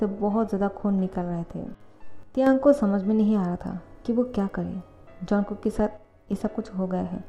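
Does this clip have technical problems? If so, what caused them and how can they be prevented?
Yes. A brief loss of one stereo channel is the likely cause, an instance of one channel drops out, from 2.23 to 2.47 s and from 5.97 to 6.33 s. In the mono sum, the shared sound falls abruptly by about 6 dB and anything unique to that channel vanishes. Secure connectors and check each channel's signal path to prevent it.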